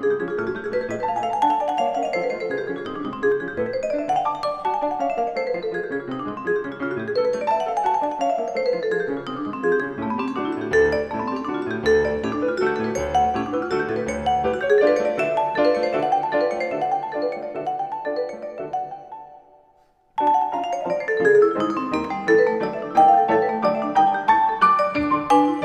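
From the start until 3.32 s, the audio is heard twice, with a second full-band copy trailing by about 300 ms and roughly 10 dB quieter, then ending abruptly. This doubled audio track is likely a second, slower capture path or an edit holding two offset copies.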